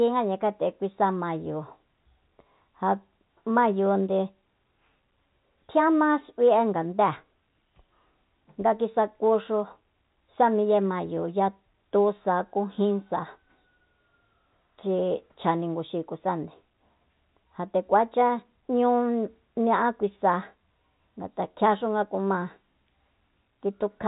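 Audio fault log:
Nothing wrong turns up anywhere in this speech, and the band topping out around 3.8 kHz is just what ordinary G.711 telephone coding gives you.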